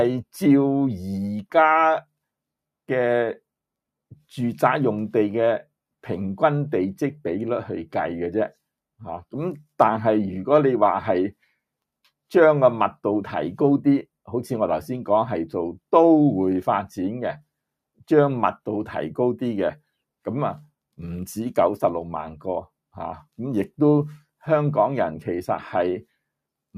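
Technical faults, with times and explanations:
No technical faults, with times and explanations, to report.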